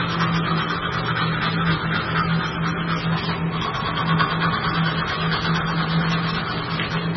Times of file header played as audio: none

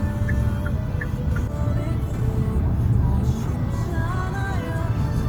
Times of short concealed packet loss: none

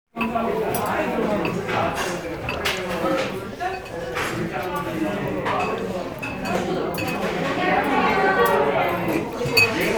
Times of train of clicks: 2.07-9.89

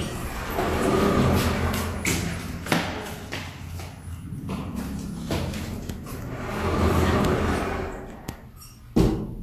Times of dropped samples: none

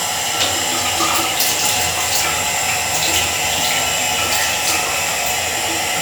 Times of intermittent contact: none

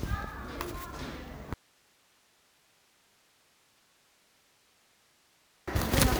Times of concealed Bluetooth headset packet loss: none

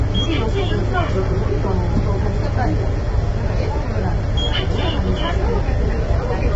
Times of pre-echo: none

